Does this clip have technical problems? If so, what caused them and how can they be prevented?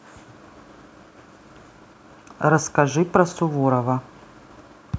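No, there's nothing wrong here; the speech has simply passed through a call's microphone processing, which trims the deepest bass and leaves nothing above 8 kHz, and that's just how call audio normally sounds.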